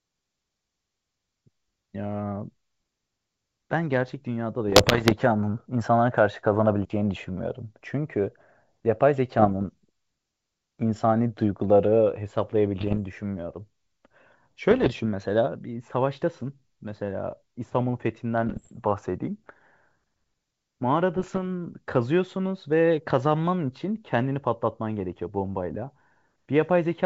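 Speech over a wideband G.722 line that sounds like the full 64 kbit/s mode, and it's hit by bit errors on an ADPCM link in six bursts: 4.68–5.13 s, 9.39–9.66 s, 12.80–12.99 s, 14.71–15.00 s, 18.46–18.74 s and 21.15–21.39 s. Each flipped bit knocks the decoder's step size and predictor off, so you hear pops and gritty, level-jumping roughness that rings on briefly. The error rate is around one percent, heaviest at 4.7 and 18.5 s.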